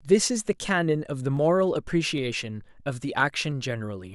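Three sharp, isolated clicks turn up at 1.37, 2.18 and 3.52 s in the speech. Each is most likely dropped samples: a fraction of a millisecond goes missing, so the waveform jumps abruptly to a later value and you get a thin tick.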